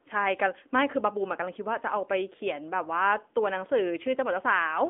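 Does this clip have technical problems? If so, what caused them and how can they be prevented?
Yes. Throughout, the speech carries the AMR narrowband mobile codec sound: a 250 Hz to 3.5 kHz phone band with nothing above 3.7 kHz, and plainly audible buzzy, synthetic pulse-model coding consistent with a mid-rate mode near 10 kbps. To prevent it, route the call over a wideband codec such as AMR-WB or EVS, or record locally instead.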